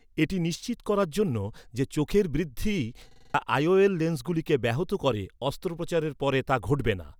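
At 3.11 s, just after "জন্য যে চোখের বৃদ্ধি", the speech breaks into a rapid stutter lasting until 3.34 s: one 46 ms fragment repeats five times at about 21.5 Hz, a machine-gun rattle. This is a system hang loop. The computer or driver stalled while the audio hardware kept replaying the same ring buffer, which fits a 2048-sample buffer. Roughly a fifth of a second of the speech is missing.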